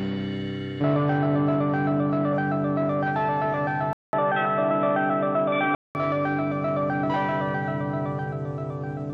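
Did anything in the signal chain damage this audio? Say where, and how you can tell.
Yes. From 3.93 s to 5.95 s the sound goes dull and boxy with nothing above 3.8 kHz, after a 200 ms silence at the switch, a new noise floor roughly 30 dB down, and no clear level change. This is likely the input switched to a poorer device at the driver stage.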